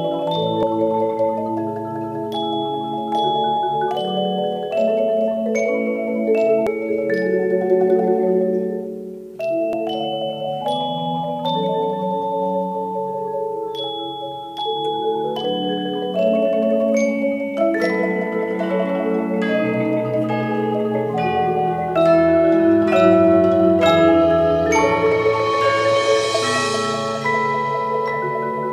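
At 0.63, 6.67 and 9.73 s compressed frames are skipped: the audio jumps ahead by roughly 0.4 s, 0.7 s and 0.3 s, consistent with roughly 4, 10 and 3 whole frames of about 93 ms each.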